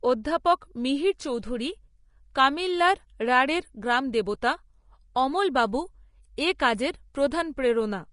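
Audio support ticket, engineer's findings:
Vorbis compression, throughout: hissy, grainy treble, nothing above 10.5 kHz, plainly audible codec damage. Likely cause a low-quality Vorbis encode, consistent with about 33 kbps; coarse residue quantisation turns fine high-frequency detail into noise, lowered cut-off removes the top.

Pre-echo at 6.59 s: brief hiss, about 11 ms, ahead of a sharp speech attack, onset smeared. Transform block spreads its quantisation noise evenly, so noise sized for the loud onset leaks into the quiet moment just before it.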